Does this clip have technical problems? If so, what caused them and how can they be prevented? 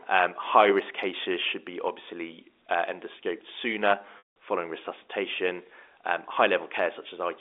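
Yes. From 0.0 to 2.01 s, a de-emphasis filter was applied wrongly: a treble cut meant to undo pre-emphasis either hit audio that never had any boost or was applied twice. The response slopes smoothly downward, about 10 dB lower at 10 kHz than at 1 kHz, so the opening speech sounds dull and muffled. To prevent this, apply de-emphasis only where pre-emphasis is known to exist, and only once in the chain.

Between 4.18 and 4.33 s, right after "uh endoscoped sooner", the line suffered packet loss with pitch repetition. About 180 ms of audio went missing, which fits a run of nine 20 ms packets, and the receiver bridged the gap by repeating the last pitch period. That buzzy held sound fades to silence before the speech cross-fades back in at "following resuscitation". To prevent this, use a jitter buffer with forward error correction or redundant packets so short bursts of loss can be rebuilt.

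The narrow telephone band from the G.711 A-law coding is audible throughout.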